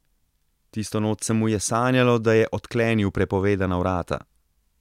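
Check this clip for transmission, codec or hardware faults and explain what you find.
I checked the clip and found nothing to explain.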